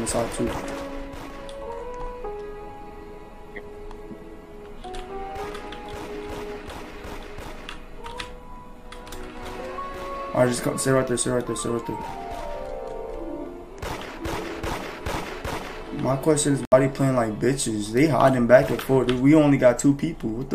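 At 16.65 s the sound cuts out for about 85 ms, returning at 16.74 s, and the material that comes back has moved on, as though it kept playing through the hole; the missing stretch fits roughly three lost frames, about 70 ms of audio. This is likely a Bluetooth dropout, with packets arriving too late for the headphones and being discarded. Unlike a stall or underrun, which pauses and then picks up where it left off, nothing here is delayed; the lost portion is simply gone.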